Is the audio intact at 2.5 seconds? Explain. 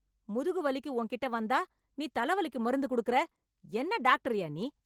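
No. Opus voice compression runs through the whole clip, including 2.5 s. Hybrid mode codes the speech below 8 kHz with linear prediction and a coarse excitation, with a CELT layer above. The damage fits about 16 kbps and is plainly audible as hoarse, slightly robotic speech.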